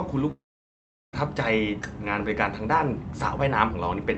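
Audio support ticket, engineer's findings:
Speech cuts out at 0.31 s; returns at 1.15 s with roughly 0.8 s of content missing. Short fading buzz fills the start of the gap, then near-silence for most of it (about 0.74 s). Likely cause: long network dropout, with receiver concealment extending the last sound before muting. Audible top end stops near 8 kHz, consistent with the Opus call path at a modest bitrate.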